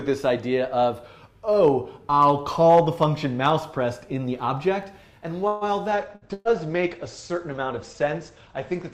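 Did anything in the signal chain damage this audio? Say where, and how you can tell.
Yes. Network stage, a call audio freeze: at 5.47 s the last sound is held and fades for about 0.14 s, then continues at 5.64 s exactly where it stopped, with nothing lost. Delayed packets likely drained the jitter buffer, inserting about 139 ms of extra delay.

Codec stage, a call bitrate drop: from 5.95 s to the end, the bandwidth estimate fell and the encoder went from 64 to 14 kbps. The coarser coding roughens the sound, and the audio band shrinks from 20 kHz to 8 kHz, muffling it. It never recovers.

Network stage, two bursts of packet loss, both inside the low-bitrate stretch: 6.15 to 6.24 s, a 60 ms concealment replacing 60 ms of lost audio, and 6.33 to 6.48 s, 118 ms filling a 120 ms hole. Each time the receiver extends the last sound as a decaying buzz or hiss, then jumps ahead.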